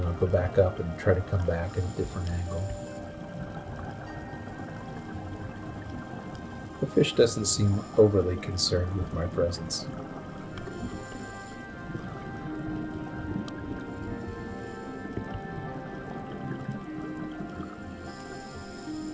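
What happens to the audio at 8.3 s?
Nothing goes wrong at 8.3 s: the audio carries on intact through the WebRTC call path, with the G.722 band limit leaving nothing above 8 kHz, as it does throughout.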